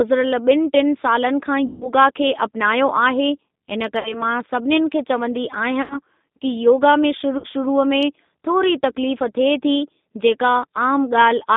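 The whole clip passes through the G.729 codec, an 8 kbit/s VoIP coder that rebuilds speech from a vocal tract filter, a pitch predictor and a few pulses per frame. The line is cut to roughly 200 Hz to 3.7 kHz, so the speech sounds thin and boxy, and the coarse excitation leaves a plainly audible rough, synthetic edge.

At 1.67 s, packets are lost for about 140 ms, and the VoIP packet loss concealed by the speech codec takes over until 1.91 s. The decoder repeats its last pitch and filter at falling gain, so the speech smears into a buzzy tone or coloured noise that fades. Shorter gaps of 60 ms at 3.99 s, just before "मां सभिनीनि खे", and 80 ms at 5.82 s sound the same. At 7.38 s, after "योगा में" and before "शुरूअ में थोरी", 60 ms goes missing, and the speech stays weak briefly as the decoder recovers.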